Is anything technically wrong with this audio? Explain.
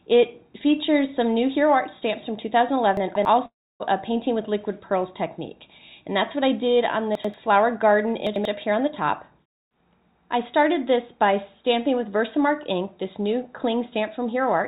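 Yes. Three moments are jumbled by chunks out of order, and there is one gap, likely a long network dropout, all heard over a narrow call-codec sound with nothing above 4 kHz.

Chunks out of order at 2.97–3.25 s (two chunks late), 7.15–7.34 s and 8.27–8.45 s (one chunk late each). Blocks of about 93 ms were written after the blocks that should follow them. The sound lurches at the joins. A waveform shows abrupt steps, and a spectrogram shows vertical broadband lines at each join.

At 3.46–3.82 s, about 340 ms of audio never arrived, likely because of a long network dropout. The receiver stretched the last sound into a fading buzz, then left about 290 ms of near-silence. On a spectrogram this appears as a smeared, decaying band followed by an empty dark gap before the audio resumes.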